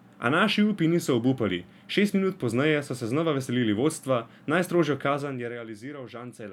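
From 5.06 to 5.57 s the speech carries zipper noise: a fade of roughly 15 dB is applied in discrete, unsmoothed steps, around a hundred per second, and each jump leaves a tiny click, producing a fine buzzy ticking over the voice as it drops.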